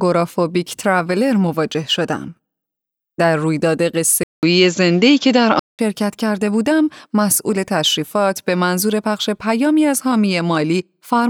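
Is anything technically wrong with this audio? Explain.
Yes. From 4.23 s to 5.79 s the speech drops out for about 194 ms, then returns duller and boxier, with nothing above 7.6 kHz. The level shifts by around 5 dB, and a new background noise sits roughly 35 dB under the speech. This points to an input switched to a poorer device. The recording likely changed to another microphone or a headset call profile, whose narrower band, different gain and own noise floor replace the original path until it switches back.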